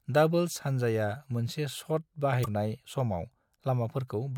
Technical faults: damaged data in a compressed stream

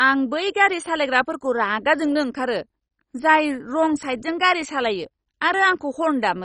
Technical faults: MP2 compression

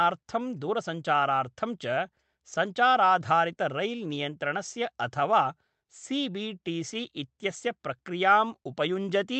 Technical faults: clock drift between sender and receiver; repeated timing corrections

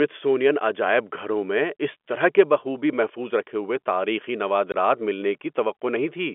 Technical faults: packet loss filled with silence

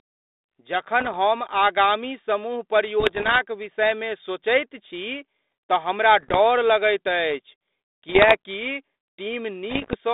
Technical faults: bit errors on an ADPCM link

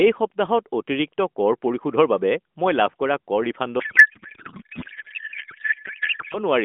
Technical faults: codec payload misread

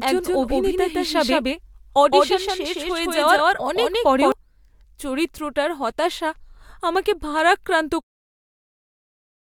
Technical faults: doubled audio track

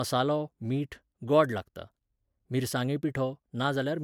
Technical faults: none

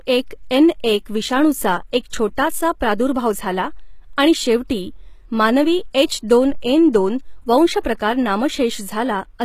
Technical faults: HE-AAC compression

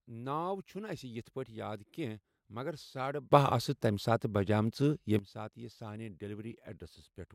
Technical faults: sudden gain jump

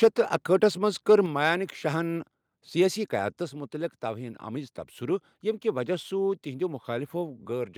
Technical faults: microphone overload; microphone volume stepped down

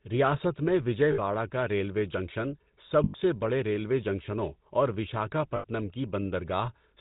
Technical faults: GSM full-rate codec; lost GSM frames

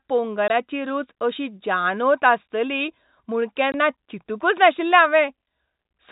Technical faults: packet loss filled with silence

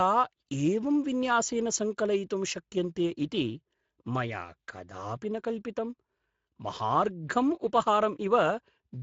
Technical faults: Speex codec

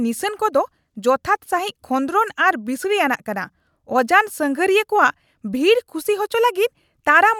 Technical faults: none

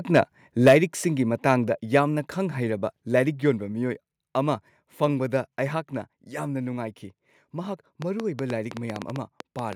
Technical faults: microphone overload; microphone volume stepped down; train of clicks

